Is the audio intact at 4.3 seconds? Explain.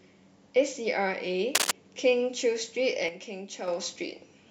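Yes, at 4.3 seconds the speech plays through cleanly, with no dropout, click, distortion or other audible fault at that point.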